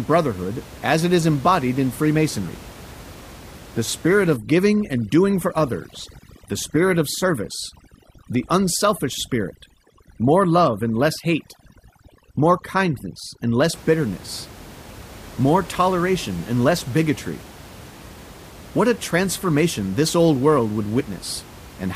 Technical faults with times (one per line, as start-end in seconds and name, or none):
4.36-13.74 overdone noise removal
6.64 compressed frames skipped
20.99-21.01 compressed frames skipped